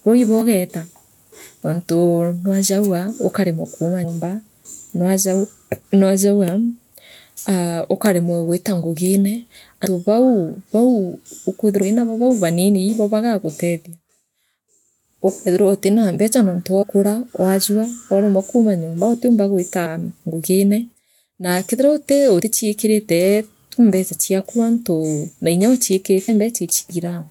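Compressed frames are skipped at 0.40, 4.03 (after "nwajagua ukaremwa kuuma"), 9.85, 11.81, 16.82, 19.85, 22.41 and 26.28 s. Each time, missing or rejected frames make the speech jump ahead by roughly 50 to 150 ms.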